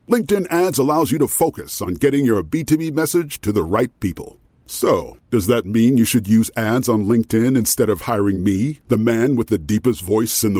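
No technical faults are audible anywhere in the speech recording.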